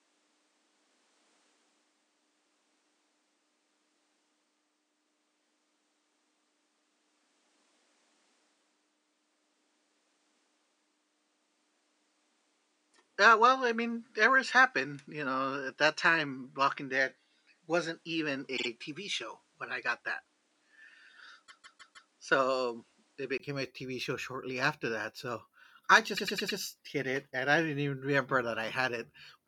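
From the start to 23.40 s the speech is dull and band-limited, with nothing above 10.5 kHz, a faint noise floor roughly 45 dB down, and a level about 5 dB off. It clears at 23.40 s after a 20 ms gap, likely an input switched to a poorer device and then back.

Repeated frames cause stutters where a block replays: a 52 ms block plays twice more at 18.56–18.67 s, a 157 ms block four more times at 21.46–22.09 s, and a 105 ms block four more times at 26.16–26.58 s.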